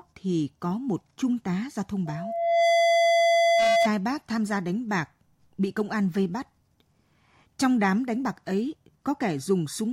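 A microphone picked up the loudspeaker it was feeding, and the loop gain passed one at 678 Hz. That is loudspeaker feedback squeal: from 2.06 to 3.89 s a pure tone swells over about 0.7 s to sit roughly 5 dB above the speech.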